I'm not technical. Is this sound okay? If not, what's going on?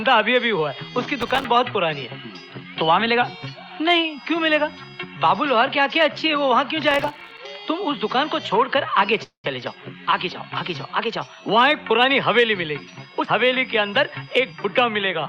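No. The audio has three kinds of fault.

From 1.21 to 1.45 s and again from 6.91 to 7.39 s there is processor overload crackle: a gritty, tearing burst. The computer handling the audio fell behind and missed a run of very short buffers, each a few milliseconds long. Each miss left a brief silent hole with hard edges.

From 9.23 to 9.46 s the sound smears into a fading buzz, then goes silent for about 0.12 s before resuming where it left off. This is a call audio freeze, likely caused by delayed network packets. Nothing is lost, but about 0.2 s of extra pause is added.

From 13.20 to 15.11 s there is a jitter buffer speed-up. The receiver had built up too much delay and trimmed tiny slices to catch up, removing about a fifth of a second in total. The audio runs roughly 11 percent fast at unchanged pitch and sounds hurried.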